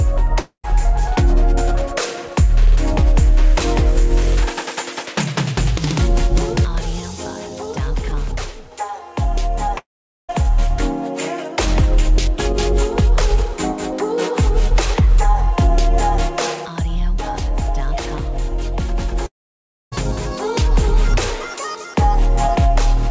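A likely long network dropout, with audio packets failing to arrive, breaks the sound at 0.40–0.66 s, 9.78–10.45 s and 19.26–19.94 s. Each time the last sound is stretched into a fading buzz, then falls silent, and about 0.24, 0.52 and 0.66 s of audio is lost for good. Throughout, nothing sounds above 8 kHz, which fits a wideband call codec such as G.722.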